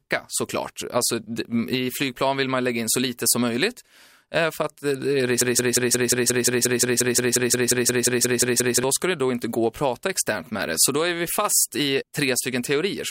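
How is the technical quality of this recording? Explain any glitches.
The speech has one clear glitch, a broken-record loop from 5.41 s to 8.84 s. For about 3.4 seconds a single 177 ms fragment repeats exactly, back to back, 19 times, giving a rapid mechanical stutter before normal playback returns. The likely cause is a stall in the player, encoder or stream that kept resending the last fragment it held, so the speech that belonged in that stretch is lost. On a waveform or spectrogram this shows as an identical pattern tiled at a steady 177 ms spacing.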